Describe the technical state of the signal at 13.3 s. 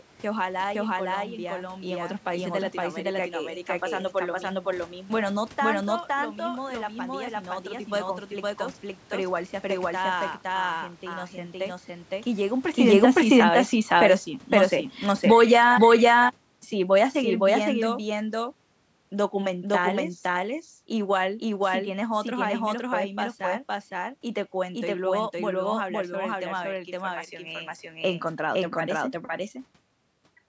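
At 13.3 s you're hearing a doubled audio track: a second full-band copy of the speech trails the original by about half a second at roughly the same level, with no decay or room colour, most likely because a slower path captured the same audio a second time.

You're also just inside a stretch of automatic gain falling, running from 12.77 to 25.84 s. The gain control judged the input too loud or its background noise too strong and is easing it down by about 14 dB, so the speech and room noise sink together, shortly after a talker movement around 12.5 s.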